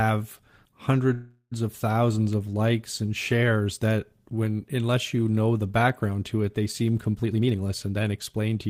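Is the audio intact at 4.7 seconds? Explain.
Yes, the audio is intact at 4.70 s, with no dropout, click, distortion or other fault at that moment.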